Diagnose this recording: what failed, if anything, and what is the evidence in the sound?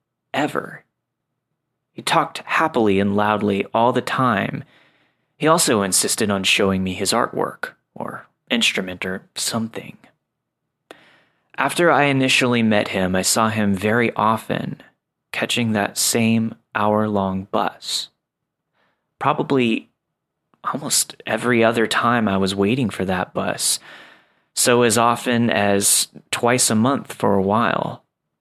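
Nothing in the speech signal points to a failure at any stage of the chain, from capture and conversion through processing, transmission and storage to playback.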